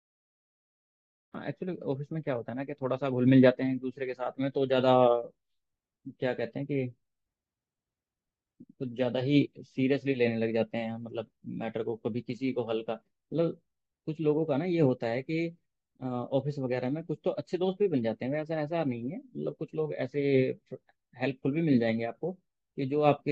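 Digital silence runs from the opening until 1.34 s, where the speech bursts in mid-sound with no natural onset or fade-in. This is a cut-off start: capture or streaming began late, so the beginning of that sound was never recorded.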